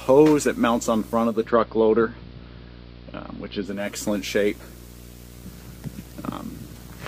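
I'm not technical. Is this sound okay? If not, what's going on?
No. A screen or video cable is leaking into the audio path, causing video or display buzz. Throughout the clip you hear a low buzz repeating about 60 times a second, a gritty hash above it, and a very high whine near 15.7 kHz.

At 1.15 s, a hybrid radio lost its digital signal and faded over about a third of a second to the station's AM broadcast; this is digital radio blending to analogue. Until 4.0 s the sound turns dull, and a soft hiss appears.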